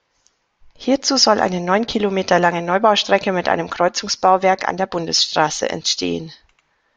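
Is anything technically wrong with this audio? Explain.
No, nothing in this speech recording points to a technical fault.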